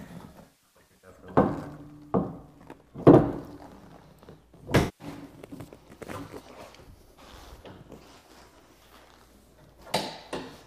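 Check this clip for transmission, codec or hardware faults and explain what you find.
There is AAC frame loss with concealment in three places. From 0.30 to 1.10 s, about half a second of audio drops out in scattered gaps, the longest around 150 ms. From 4.79 to 5.07 s, roughly 210 ms is lost. From 8.18 to 8.53 s, about 150 ms is lost in short runs, the longest near 70 ms. Each time the decoder patches the gap with recycled spectral content from the last good frame. The sound turns briefly smeared, noisy and phasey.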